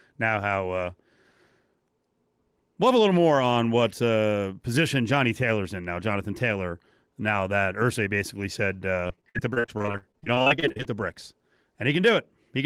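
After "basically said", from 9.07 to 10.96 s, repeated packet loss (robotic sound) sets in. The speech keeps breaking into short holes, the longest 56 ms. Each hole is patched by extending the previous sound, covering about a third of the stretch. It sounds choppy, with pieces missing.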